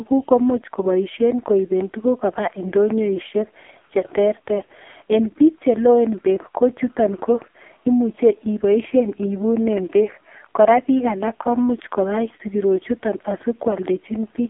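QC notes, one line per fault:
Throughout: AMR narrowband mobile codec. The speech sits in a telephone band of 250 Hz to 3.4 kHz, with nothing above 3.5 kHz. Heavy coding damage makes it buzzy and synthetic. Sparse pulses drive a vocal-tract model, which fits a low 5.9 kbps mode.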